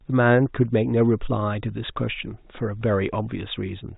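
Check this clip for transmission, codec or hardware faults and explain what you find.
No transmission, codec or hardware faults.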